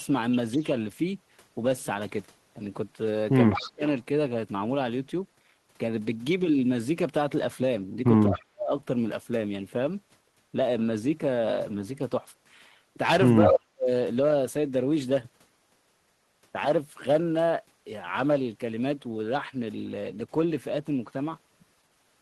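Right at the start, from 0.53 to 0.67 s, there's a faint echo leak: a copy of the speech trailing about 205 ms behind, roughly 25 dB under the direct signal. It comes back louder from 3.52 to 3.71 s, only about 10 dB down. Same delay both times, which points to one loudspeaker path whose echo canceller likely wasn't fully removing what its microphone heard and sent it back down the line.

Overlapping those moments, the speech itself gets pushed down, most likely speech suppressed in double talk, with the canceller turning down the loudspeaker side's voice along with the echo while both ends are active. From 0.57 to 0.61 s it's just a small dip of a few dB. From 3.56 to 3.83 s it sinks around 20 dB. Then 8.29 to 8.72 s and 13.48 to 13.89 s are nearly full dropouts, roughly 35 and 40 dB down, each lasting about 0.4 s.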